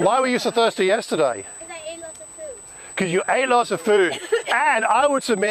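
USB whine runs through the whole clip: a fixed-pitch whine at 8 kHz, strongest at its 16 kHz harmonic and only about 10 dB below the audio. It comes from the bus's 125-microsecond microframes leaking through power or ground, which sets it apart from mains hum, whose pitch sits far lower.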